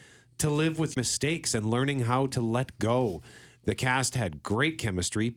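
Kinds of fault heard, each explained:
Damaged data in a compressed stream: at 0.93 to 0.97 s, between "to live with" and "and learning how to", corrupted frames throw the decoder out of sync, leaving a brief disruption.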